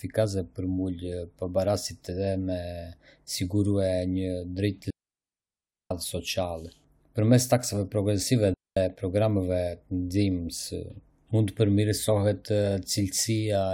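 At 4.90 s a digital wireless dropout cuts in: the radio link loses more data than the receiver can repair, so it mutes the speech, holding near silence for about 1.01 s until 5.91 s. A second, shorter dropout follows at 8.54 s, lasting 226 ms to 8.77 s. Each is a clean hole with only a very quick fade at its edges, with no crackle, hiss or noise burst before or after.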